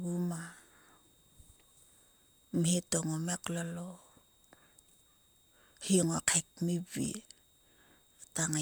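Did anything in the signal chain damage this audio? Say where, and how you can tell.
Yes: a switching supply whistle in the analogue power path sits about 40 dB under the speech throughout, drifting between 3.71 and 3.75 kHz. On a spectrogram it is a faint, slightly wavering horizontal line.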